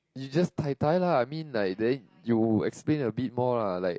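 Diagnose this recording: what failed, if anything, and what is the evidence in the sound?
Low-delay AAC compression runs throughout the speech at the codec stage: plainly audible rough, grainy texture, with noise filling the gaps between harmonics. The likely cause is AAC-ELD, whose short frames resolve pitch poorly, and the damage level fits a bitrate near 32 kbps.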